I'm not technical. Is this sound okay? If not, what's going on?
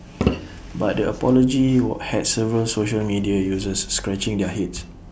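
Yes, nothing stood out as a problem when listening to this recording.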